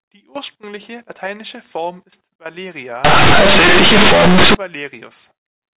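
From 3.05 to 4.55 s the speech, carried over telephone-band mu-law coding with nothing above 4 kHz, turns into a harsh, very loud buzz: companded audio read as linear. The mu-law bytes are played as plain 8-bit samples without expansion, so every sign change throws the output across roughly half its range. Unlike clipping, which squashes only the loud peaks, this lifts quiet moments to the level of loud ones, filling the pauses with heavy noise.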